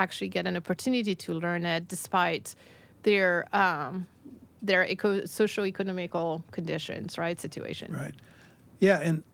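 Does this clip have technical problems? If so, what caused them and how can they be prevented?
No, this clip has no technical problems, so there is nothing to prevent.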